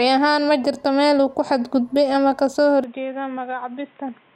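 A speech clip in which, at 2.84 s and with no gap, the sound abruptly turns dull and boxy and stays that way to the end, most likely because the input switched to a poorer device. From that point nothing appears above 3.8 kHz, so a spectrogram shows the upper band cut off flat, while the waveform drops by roughly 10 dB. A new noise floor sits roughly 30 dB below the signal.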